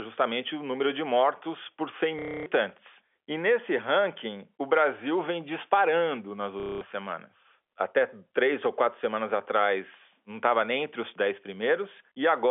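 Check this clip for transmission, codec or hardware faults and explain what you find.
Two dropouts are audible, both the same transmission fault, carried over a G.711 telephone line whose 300 to 3400 Hz band comes through as expected.

Packet loss with last packet repeated, at 2.19 to 2.46 s and 6.6 to 6.81 s (between "vem disparando nas" and "semanas até três ou"). Missing packets were filled by replaying the previous one out of step with pitch. The repeats give a robotic buzz that suggests 30 ms packets.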